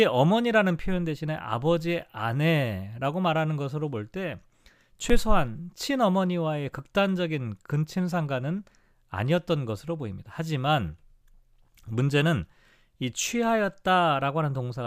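From 1.38 to 12.56 s, about four regular clicks recur every 3.72 s, likely clock drift buffer slips, where a clock mismatch of several hundred ppm forces a short block of samples to be dropped or repeated.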